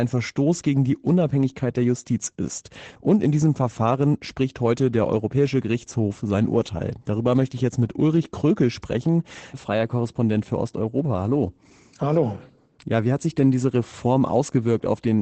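Throughout the speech, Opus voice compression in its SILK linear-prediction mode, at a rate pointing to about 12 kbps, codes the excitation coarsely and limits the band to wideband, so nothing sounds above 8.8 kHz. The result is plainly muffled, hoarse and slightly robotic.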